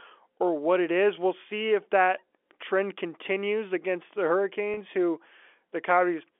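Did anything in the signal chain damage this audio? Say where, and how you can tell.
Yes, in the network stage: right after "trend continues against the", at 4.74 to 4.77 s, about 30 ms went missing. That's packet loss with pitch repetition. The receiver looped the last pitch period across the gap, so you hear a brief buzzy hold, which fits three 10 ms packets dropping. The G.711 telephone band around it is just the usual 300 Hz to 3.4 kHz.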